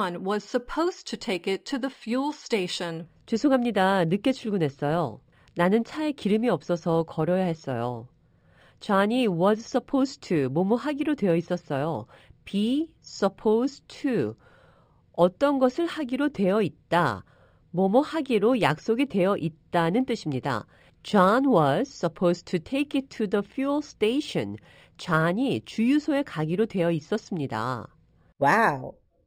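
Throughout, sibilants shimmer faintly and metallically above a dulled top end. This is imaging from linear upsampling, leaving mirror images at 6 to 12 kHz, roughly 30 dB down.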